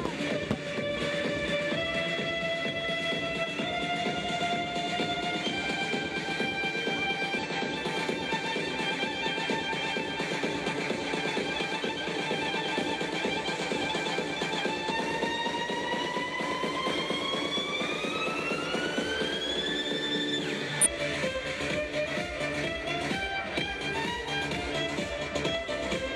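At 7.39 to 7.45 s, 14.86 to 14.92 s and 20.81 to 20.87 s the audio is briefly broken for about 60 ms each time, heard as a chirp, squawk, click or short hole in the sound. These are damaged data in a compressed stream: bytes in the encoded file were lost or corrupted, so the decoder misread or discarded those frames, lost sync and had to search for the next valid frame header before playback could continue.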